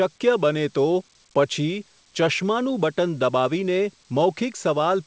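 No faults to report in this speech; it carries the normal character of a WebRTC call path, with nothing above 8 kHz, which fits a G.722 wideband codec.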